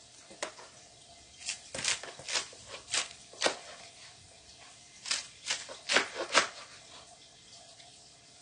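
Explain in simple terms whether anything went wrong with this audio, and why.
Something did go wrong, and it lasts from the first second to the last. Nothing is heard above about 9.9 kHz, so the sound lacks its top sparkle and air, and it keeps the artefacts of heavy compression. This points to low-bitrate audio saved at a high bitrate: the sound was likely squeezed hard once, then re-saved as a roomy MP3. The larger file cannot bring back what the first squeeze threw away.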